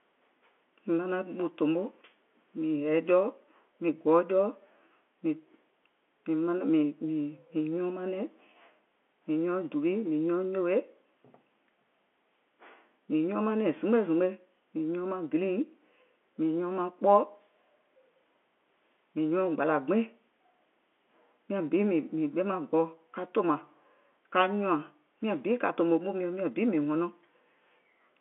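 Nothing here counts as a fault; the speech simply carries the narrow telephone band you'd expect from an ordinary phone line, roughly 250 Hz up to 3.4 kHz, which fits standard G.711 telephone coding.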